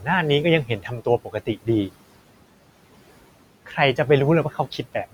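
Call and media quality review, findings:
Noise suppressor artifacts, whole clip. Suppressor gating room noise (sitting about 18 dB under the speech) down by about 18 dB between phrases. Background pumps: sinks in gaps, returns under speech. Probable component: noise suppression stage, band gains tracking the noise estimate too aggressively.

Speech cut by the noise suppressor, 0.65–1.68 s. Suppressor misclassifying low-level speech as noise, pulling it down by as much as about 19 dB over roughly half a second within that span. Soft speech swallowed, sounds faint.

Speech cut by the noise suppressor, 4.51–4.79 s. Same misclassification, shallower drop of about 9 dB for about a tenth of a second. Short dip in level, soft sounds near the end of the clip partly lost.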